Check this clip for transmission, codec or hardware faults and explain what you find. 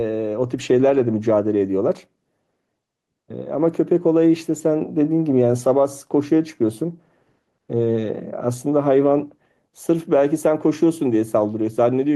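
One fault runs through the whole clip: gain pumping. The call path can be heard too, with the top end stopping near 12 kHz, as fits an Opus link.

The pumping lasts from start to finish. The swing is around 5 dB. The likely cause is input gain set too high, with a fast limiter or compressor pulling it back on each peak. Loud and quiet parts sit closer together, and the speech sounds squashed.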